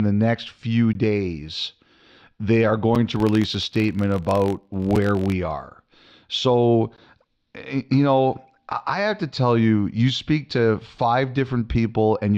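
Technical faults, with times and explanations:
0.93, 2.95, 4.96, 6.96 s: gap between stream segments. Brief hard-edged silences of about 18, 6, 6.5 and 16 ms, spaced about 2 s apart. The first falls after "the next few", the second after "they are", and the last just before "eh you know I". Segment timestamps leave a small hole that the player fills with silence. Unlike a dropout, no sound is lost. It is pushed later.
3.10 to 5.34 s: filter restarted on every block. A steady tick-buzz at about 47 Hz, which fits a 1024-sample block at 48 kHz. Each block starts from a cleared filter state, producing a small transient. It rises and falls with the speech level and never leaves silent holes.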